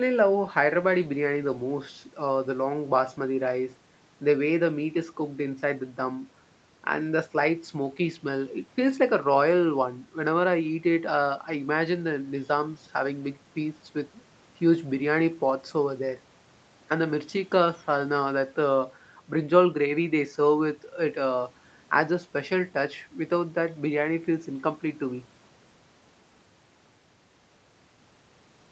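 No technical faults can be heard in this speech recording, which shows the band limit expected of a call, with nothing above 8 kHz after the call microphone processing and the WebRTC call path.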